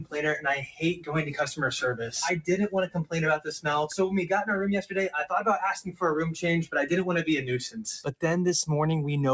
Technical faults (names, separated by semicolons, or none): noise suppressor applied to music or sounds